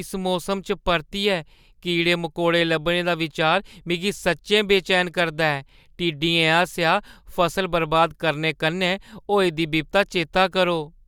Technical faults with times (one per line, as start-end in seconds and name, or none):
none